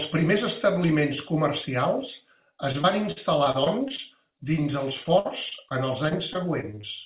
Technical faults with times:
2.72-4.33 repeated packet loss (robotic sound)
4.89-5.72 repeated packet loss (robotic sound)
6.08-6.85 repeated packet loss (robotic sound)

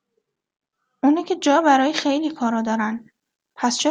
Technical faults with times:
1.43-3.90 pre-emphasis left on

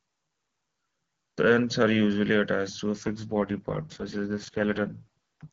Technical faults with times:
2.96-5.47 AMR rate drop

